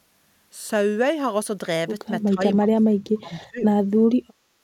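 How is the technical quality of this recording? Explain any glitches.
The recording has two dropouts in the speech. From 2.34 to 2.42 s the level dips by roughly 10 dB. From 2.6 to 3.69 s it sinks much deeper, by around 35 dB, almost gone. This is likely speech suppressed in double talk. The echo canceller mistook the talker for loudspeaker echo and turned it down.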